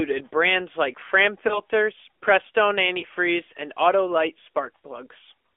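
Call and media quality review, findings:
AMR narrowband mobile codec, throughout: speech band-limited to about 300 Hz to 3.5 kHz, plainly buzzy and synthetic. On a spectrogram there is a hard ceiling near 3.5 kHz with a smeared harmonic structure. The degree of damage fits a mid-rate AMR-NB mode, around 10.2 kbps.

Lost AMR speech frames at 1.48–1.60 s and 3.00–3.05 s: a brief dip and warble where one 20 ms frame was concealed. The decoder repeated the previous pitch and spectral envelope at reduced gain. The waveform shows a short amplitude sag, and the spectrogram shows frozen, blurred harmonics before recovery.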